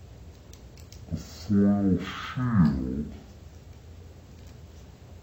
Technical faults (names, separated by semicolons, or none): stereo read as mono